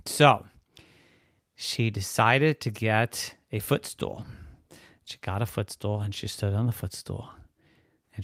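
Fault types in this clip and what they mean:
Nothing stood out as a fault on listening to the speech here.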